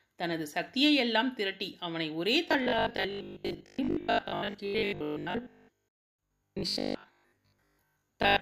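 From 2.5 s to 8.4 s the speech turns into a rigid 50 Hz metallic buzz, robotic sound likely from repeating 20 ms buffers while most audio is skipped.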